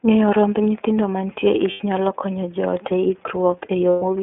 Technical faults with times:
0.00-4.22 iLBC codec
1.70-1.81 lost iLBC frames
3.89-4.03 lost iLBC frames

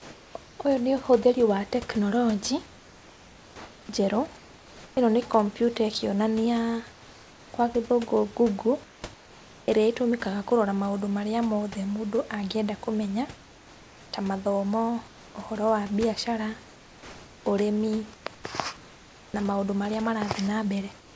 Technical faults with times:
0.00-0.35 comfort noise in place of the background
2.66-4.97 comfort noise in place of the background
6.92-7.52 comfort noise in place of the background
8.84-9.68 comfort noise in place of the background
13.37-14.12 comfort noise in place of the background
15.08-15.35 comfort noise in place of the background
18.14-19.34 comfort noise in place of the background
20.99-21.16 comfort noise in place of the background

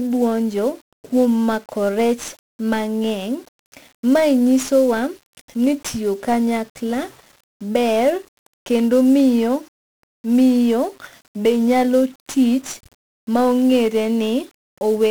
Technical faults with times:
0.00-15.11 1-bit DFPWM compression

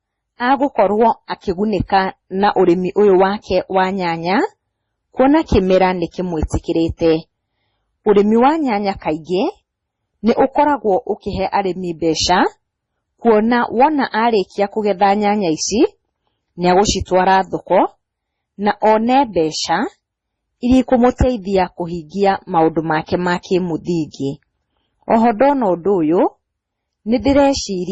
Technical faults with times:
0.00-27.92 transcoding between lossy codecs

